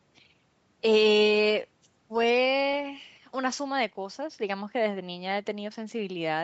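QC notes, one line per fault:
Nothing to flag in this speech clip; it has simply been through a normal call chain, microphone processing and then an Opus link that keeps everything below 8 kHz.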